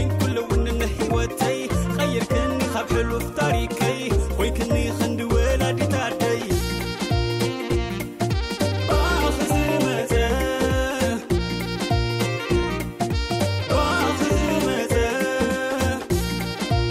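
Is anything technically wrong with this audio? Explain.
No, I hear no technical faults in this audio.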